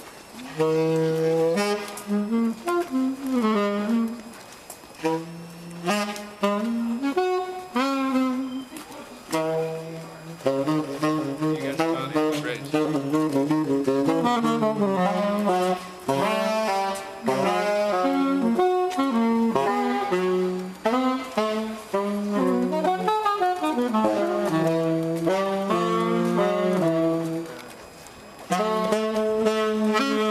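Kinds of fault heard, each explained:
Switching supply whistle: a power supply's switching stage leaks a faint high whistle, about 30 dB below the sound, wandering between 2.28 and 2.72 kHz throughout.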